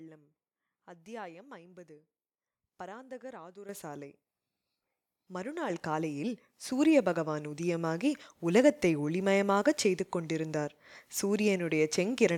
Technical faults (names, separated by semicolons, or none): microphone volume stepped up